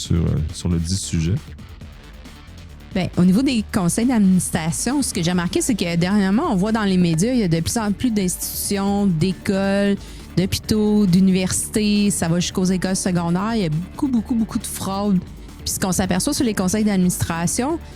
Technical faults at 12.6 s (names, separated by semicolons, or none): none